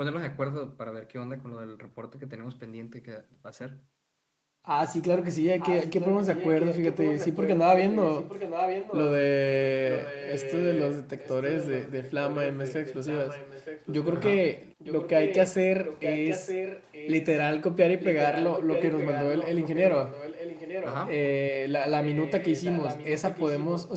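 Echo leak from 5.59 to 7.58 s, 7.91 to 9.01 s, 9.89 to 14.17 s, 14.78 to 15.48 s, 15.85 to 17.26 s, 18.0 to 20.95 s, and 22.03 s to the end. A copy of the speech returns about 0.92 s late, somewhat quieter. The likely cause is a loudspeaker echo that the far end's canceller failed to remove.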